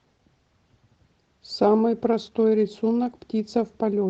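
From start to finish the speech carries Opus voice compression artefacts: a hoarse, slightly robotic roughness from coarsely coded excitation in the SILK layer, with a CELT-coded top end that keeps the fullband extension. The damage is plainly audible and fits a bitrate around 16 kbps.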